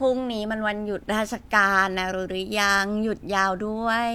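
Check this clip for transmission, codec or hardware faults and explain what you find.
No faults detected.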